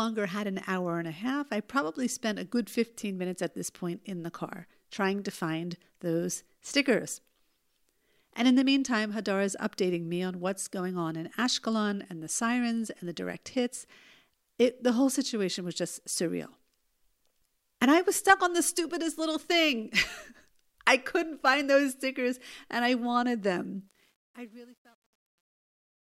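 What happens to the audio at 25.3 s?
At 25.3 s you're in the truncation distortion on the fade-out after "and I wanted them" (23.87–26.09 s). The fade is quantised to what sounds like about 10 bits without dither, so the tail goes gritty.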